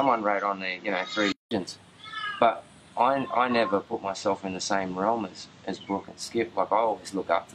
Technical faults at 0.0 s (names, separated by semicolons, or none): input switched to a poorer device